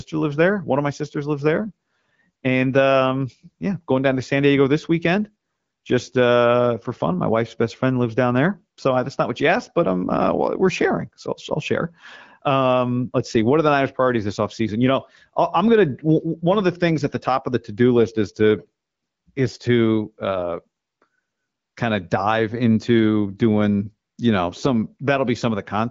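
Speech recording, with no technical faults to report.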